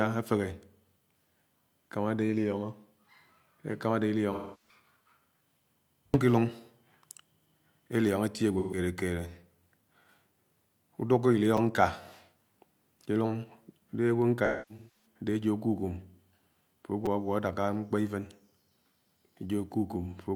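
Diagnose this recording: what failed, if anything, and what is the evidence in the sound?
The AAC stream lost frames and the decoder concealed the gaps by extending the last good spectrum. The speech smears into a noisy, phasey patch at 4.32–4.75 s (about 0.3 s) and 8.58–8.78 s (about 0.13 s). At 14.45–15.06 s, losses scattered across 0.6 s, the longest run roughly 0.3 s, leave an unstable stretch.

At the driver or buffer stage, playback ran dry and the device replayed its last buffer. Each repeat is only about 5.3 ms, which fits a 256-sample buffer, so the repeated buffer sounds as a brief click or buzz: two extra plays at 11.57 s, three at 17.06 s.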